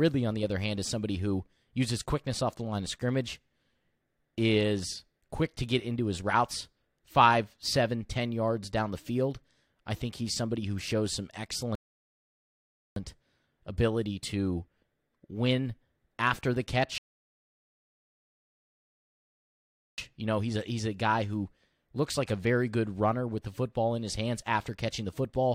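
Speech with two rebuffering stalls: silence from 11.75 to 12.96 s and from 16.98 to 19.98 s. The player ran dry and waited. Speech resumes exactly, adding about 1.2 and 3.0 s.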